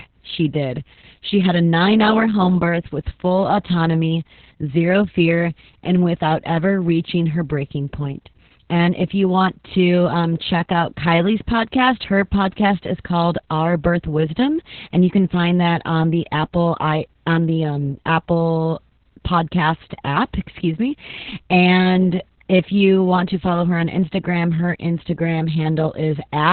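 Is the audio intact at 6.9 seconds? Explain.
No. At 6.9 seconds, as throughout the clip, the speech carries Opus voice compression damage. Nothing is present above about 4.4 kHz, which fits narrowband SILK coding at roughly 6 kbps. Its coarse excitation leaves the speech muffled, hoarse and slightly robotic.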